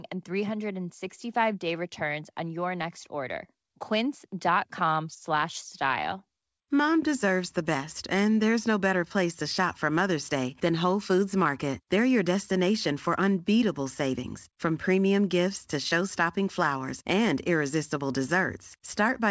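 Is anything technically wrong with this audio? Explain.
No, nothing is technically wrong with this audio.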